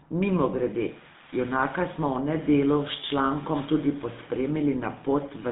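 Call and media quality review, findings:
GSM full-rate codec, throughout the clip. Buzzy, gravelly roughness across all speech, plainly audible. Probable component: speech codec on the call leg, sound consistent with GSM full rate at around 13 kbps. Mechanism: vocal-tract model driven by a sparse, regularly spaced pulse excitation, so fine detail is lost and replaced by a coarse buzz. Band roughly 150 Hz to 3.7 kHz, nothing above 3.8 kHz, hence the muffled, narrow telephone tone.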